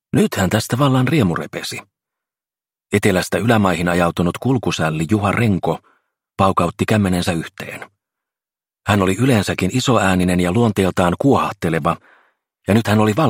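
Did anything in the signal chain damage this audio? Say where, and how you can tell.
Yes. There is a single skip at 10.23 s, caused by an overlap between stream segments. This happens at the streaming or playback stage, where the audio is delivered in segments that appear to be about 4 s long. Two segments carried overlapping time stamps, and the player trimmed the overlap from audio that was not actually duplicated. That removed roughly 11 ms of sound, so the waveform jumps discontinuously and produces a brief click or skip at that point.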